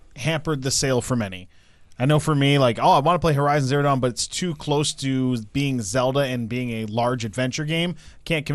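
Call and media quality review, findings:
Speech path, whole clip: likely MP2 compression starved of bits, with damage fitting a rate near 80 kbps. Encoder drops upper sub-bands and coarsely quantises the rest. Result: dull, muffled top end, bands flickering in and out, gurgling granular distortion over the speech. Plainly audible from start to end.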